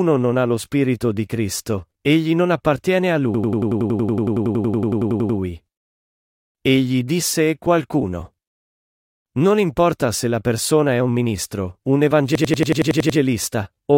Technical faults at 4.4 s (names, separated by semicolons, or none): system hang loop